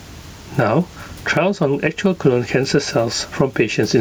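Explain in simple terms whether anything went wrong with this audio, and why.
Gain pumping runs through the whole clip: the level is pulled down on every loud sound, squashing loud and soft parts closer together, likely from a limiter fighting microphone gain set too high.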